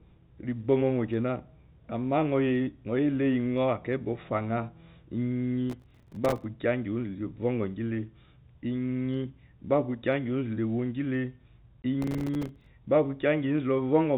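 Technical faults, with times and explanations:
5.70 to 6.44 s, processor overload crackle. A gritty, tearing crackle rides on the speech for about 0.74 s. The processor kept missing its deadlines for the small audio buffers, which sound to be about 3 ms each. Each miss dropped in a tiny silent gap with abrupt edges. Around fifty such gaps in quick succession merge into the crackle, and it stops once the load eases.
11.82 s, packet loss filled with silence. A single 20 ms hole cuts into the speech. One packet went missing in transit, and the receiver played silence in its place. The audio stops and restarts abruptly at its edges. The length of the hole matches one packet. The telephone band, limited to 4 kHz, carries on as before on both sides of the hole.
12.02 to 12.66 s, processor overload crackle. The same crackle returns for about 0.64 s, from the same cause: repeated missed buffer deadlines, each leaving a short hard-edged silence. 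This burst holds roughly thirty misses, fewer than the first, so its gaps are sparser.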